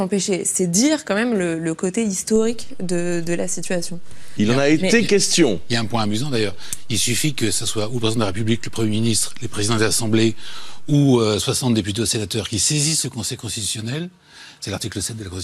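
At 2.36 s a DC step occurs: the waveform's zero line jumps to an offset of about -24 dBFS, as happens when a converter recalibrates or an input carrying an offset is switched in. The offset holds until 10.93 s, when the baseline steps back. Each transition is heard as a low thump or click, while the sound itself carries on unchanged through the whole span.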